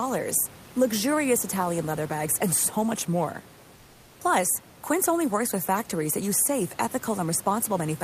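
From 3.79 to 4.15 s, comfort noise replaces the background: a flat, featureless hiss about 2 dB quieter, likely from discontinuous transmission, never the true silence of a dropout.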